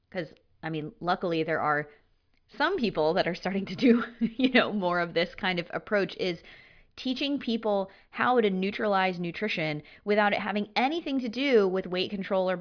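No technical faults are audible.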